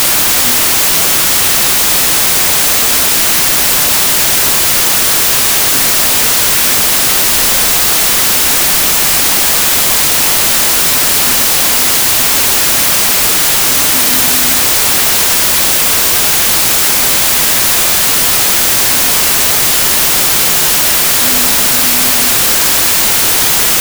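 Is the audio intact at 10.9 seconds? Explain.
No. At 10.9 seconds, as throughout the clip, loud noise buries the sound, which runs slow and low at two-thirds speed. This is a wrong sample width: packed 24-bit samples are read as 16-bit, so many values mix mismatched bytes.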